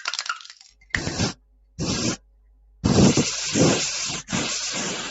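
A noise suppressor tuned for speech has been left on across the whole clip. It treats sustained tones, ambience and decaying tails as noise and turns them down, while attacks pass largely intact. The level therefore swings by around 15 dB as the processing engages and releases, so the sound pumps and thins. A plain fade or gain ride would not do this, because it lowers everything evenly rather than just the held parts.

The first clear instance of sound cut by the noise suppressor comes at 0.69 to 0.93 s. A held portion sinks by about 16 dB for roughly a fifth of a second.

At 1.07 to 1.17 s there are overlapping chunks. A 100 ms piece plays twice at a join, heard as a stutter. The repeat is what separates this from a dropout, which would leave a gap instead.

The suppressor cuts again at 1.34 to 1.79 s, about 16 dB deep over roughly half a second, and then at 2.17 to 2.84 s, about 13 dB deep over roughly 0.7 s. 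In both cases the sustained material fades under while onsets stay up. That selectivity is the mark of this fault, unlike a packet loss, which would drop onsets as well.

The second chunk overlap falls at 3.17 to 3.27 s, exactly 2 s after the first, with another 100 ms doubled. The fixed 2 s spacing matches the chunk length and confirms the overlap mechanism. Throughout, nothing above 8 kHz is present, as expected from the call path.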